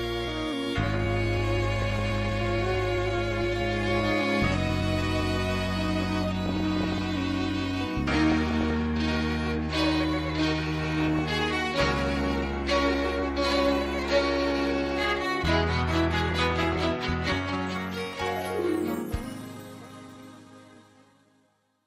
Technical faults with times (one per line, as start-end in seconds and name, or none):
1.82-2.25 DAB burbling
6.46-7.03 DAB burbling
8.32-8.71 DAB burbling
10.84-11.19 DAB burbling
16.26-16.87 DAB burbling